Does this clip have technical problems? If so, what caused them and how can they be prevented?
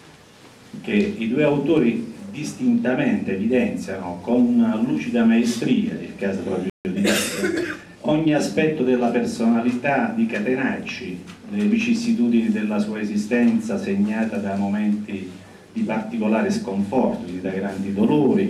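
Yes. A playback stall cuts the sound off at 6.70 s, leaving about 0.15 s of dead silence before it resumes at 6.85 s. The player likely ran dry of buffered data or had its audio thread blocked, so nothing reached the output until it recovered. On a waveform this shows as a flat gap at the zero line; a spectrogram shows a clean vertical band empty across all frequencies. A deeper playback buffer and a higher-priority, non-blocking audio thread would prevent it.

Directly after, from 6.85 to 8.37 s, there is time-compressed catch-up. The player works off its backlog by removing short slices and cross-fading the joins, running about 1.1 times faster while keeping the original pitch, so the sound feels hurried. A spectrogram keeps its harmonic spacing but packs events closer together in time, with smearing at the splice points, and the waveform's envelopes look tighter. Preventing the stall removes the need for it, and a gentler catch-up rate would make it less noticeable.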